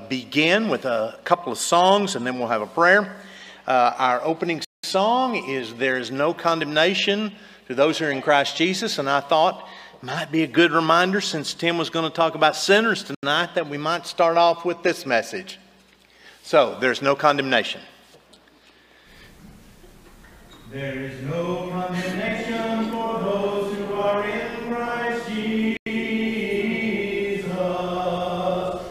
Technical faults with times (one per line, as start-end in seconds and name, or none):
4.65-4.84 Bluetooth stall
13.15-13.23 Bluetooth stall
25.77-25.86 Bluetooth stall